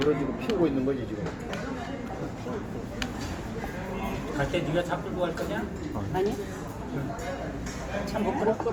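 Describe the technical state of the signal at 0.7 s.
At 0.7 s, as throughout, Opus compression is plainly audible. Noise-filled bands, likely from CELT coding near 24 kbps, make tones grainy and rough. A spectrogram shows speckled, hole-free texture up to about 20.2 kHz.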